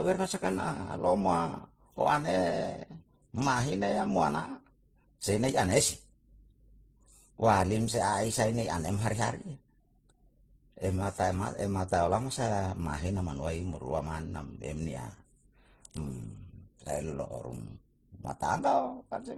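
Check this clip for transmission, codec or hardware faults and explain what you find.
One fault runs through the whole speech clip: transcoding between lossy codecs. Nothing remains above 15.7 kHz, the lowest cut-off in the chain. The mix of artefacts fits an MP3 stage, then HE-AAC, then low-rate Opus. Each later encoder spent bits re-coding the earlier smearing and added its own, so swirly, watery textures and metallic band artefacts are heard together. That mix is the likely sign of a chain rather than one low-bitrate codec, which would have a single, consistent artefact character.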